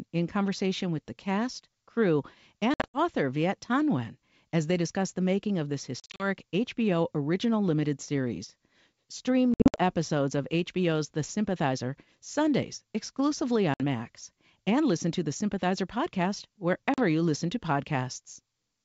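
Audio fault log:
2.74–2.99 s (after "with the cast crew"), 6.00–6.26 s (after "the making of this"), 9.54–9.81 s, 13.74–13.83 s, 16.94–17.01 s (before "you listen to"), packet loss on an ADPCM call: 40 to 180 ms of audio went missing, the longer losses broken into gaps of up to 60 ms across 200 to 240 ms, and the missing audio was filled with silence. The G.722 decoder's adaptive predictor and step size then no longer matched the sender's, so after each hard-edged hole the speech comes back slightly distorted.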